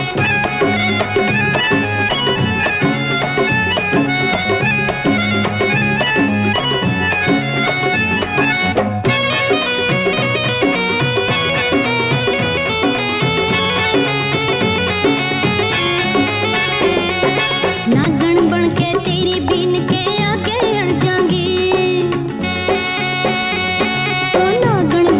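At 18.04 s the sender's voice detector likely took a quiet stretch for background and briefly stopped sending, which is sound dropped by the voice detector. A 20 ms patch of flat comfort noise replaces the audio, and 10 ms of sound is lost.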